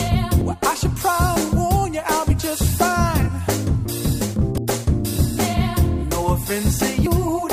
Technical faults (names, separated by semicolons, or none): audio missing between chunks; compressed frames skipped